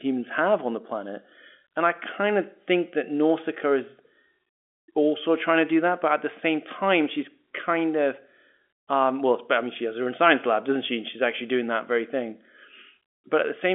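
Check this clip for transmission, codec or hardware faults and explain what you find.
Nothing stood out on listening to the speech here, which comes across as ordinary telephone-band audio with nothing above about 3.7 kHz.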